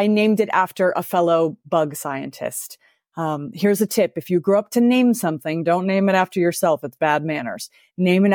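No technical faults can be heard anywhere in the speech.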